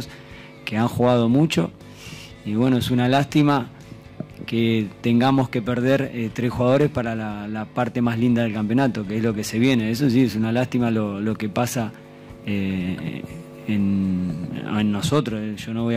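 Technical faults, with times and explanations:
No technical faults are present.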